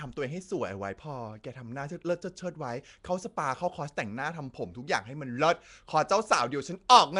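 From start to finish the speech carries a rough, hissy halo and a smeared, underwater quality, with nothing above 10.6 kHz. This is likely Nellymoser compression, Flash's old microphone codec, at a rate that points to around 44 kbps. Its fixed two bits per sample leave weak bands empty, then fill them with noise. That steady noise fill, rather than the chirpy, warbling artefacts of a starved MP3, is what sets it apart.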